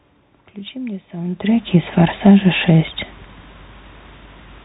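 Bluetooth CVSD headset codec, throughout the speech: each sample is coded as a single up-or-down step whose size adapts, at a rate that fits a 64 kbps link. Nothing above 3.8 kHz survives, and the coding damage is plainly audible as a rough, grainy edge.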